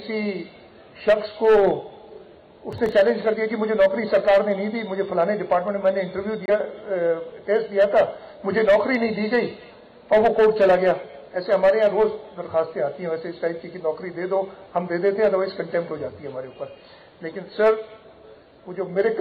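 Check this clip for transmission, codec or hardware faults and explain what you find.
Two faults stand out, a brief crackle burst and a later clean gap.

From 2.73 to 2.92 s there is processor overload crackle. Roughly five short buffers of about 3 ms each missed their deadline and came out as silence, so the sound tears into gritty clicks. The many tiny repeated gaps distinguish it from a single dropout.

From 6.46 to 6.50 s the sound drops out once, then resumes as if it had kept playing. This is likely a Bluetooth dropout. The roughly 23 ms hole fits one lost wireless packet and is a single clean silence rather than scattered crackle.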